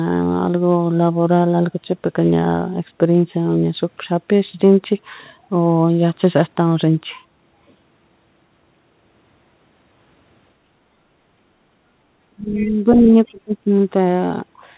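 Background gated by the echo canceller shows up in this speech recording from 10.61 to 10.99 s. While the far end played through the loudspeaker, the canceller pulled the microphone down, so the room tone sags by about 6 dB for roughly a third of a second and then recovers as soon as the suppressor releases. Speech suppressed in double talk follows between 12.23 and 13.71 s. The talker's level collapses in pieces, as much as around 30 dB at its deepest, for about a second in total, likely because both sides were speaking at once and the canceller, unable to tell near speech from loudspeaker echo, attenuated everything. In that same stretch the other side's voice is leaking through, heard as a faint scrap from 12.54 to 12.72 s, roughly 25 dB under the talker, and a brief, much stronger burst at 12.92 to 12.97 s, only about 10 dB down. Both are likely remnants of the far-end signal the canceller failed to subtract from the microphone. 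Underneath all of this runs the call path, whose hard ceiling at 4 kHz points to a narrowband call codec such as G.711 mu-law at 64 kbps.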